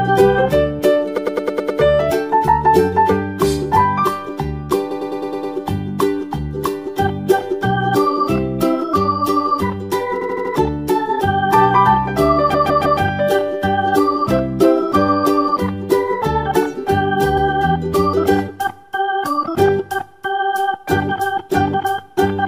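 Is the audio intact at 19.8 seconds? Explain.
Yes, at 19.8 s the audio is intact, with no dropout, click, distortion or other fault at that point.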